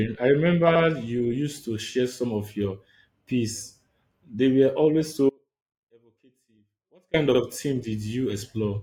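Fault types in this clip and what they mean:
Audio dropout to a faint residue: From 5.30 to 7.14 s the speech drops abruptly for 1.84 s, leaving only a faint trace about 35 dB down, likely a lost signal on a still-live path. The waveform shows a sudden near-flat stretch, and the spectrogram a dark band with faint remnants.
Repeated frames: At 7.34 s a 64 ms block of speech plays twice, which points to a pair of compressed frames being resent. This causes a brief stutter and adds 64 ms. The waveform and spectrogram show an identical pattern side by side.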